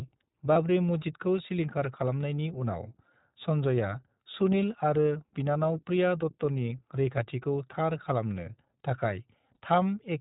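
The whole speech clip runs through the iLBC codec, and you can plainly hear it. Nothing gets through above 4 kHz, and the voice has that slightly rough, synthetic grain. The character fits the 15.2 kbps, 20 ms-frame mode, where each frame is coded on its own.

From 0.54 to 0.57 s, just before "मस्जिदखौ सिलिंखार खालामनायनि", there's a brief lost iLBC frame, about one 20 ms frame's worth. The decoder fills it by repeating the last pitch cycle with some noise, so you get a tiny buzzy held-vowel smear. The voice is clean again right after. The same thing happens at 9.54 to 9.57 s.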